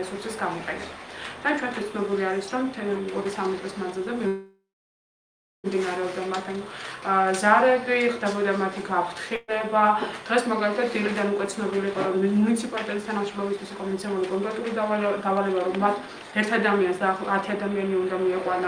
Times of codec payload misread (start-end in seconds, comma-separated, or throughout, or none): none